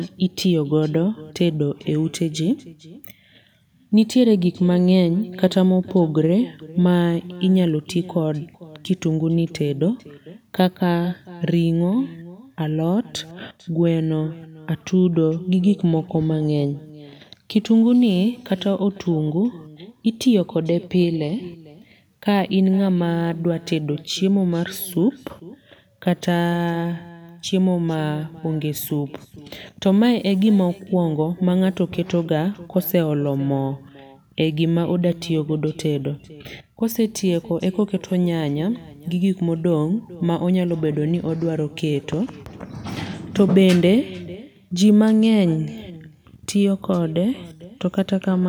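Throughout the speech, an echo with no canceller returns every phrase roughly half a second later, about 20 dB down and thinner. On a spectrogram each syllable has a faint twin trailing it. The waveform shows small repeated bursts filling the pauses.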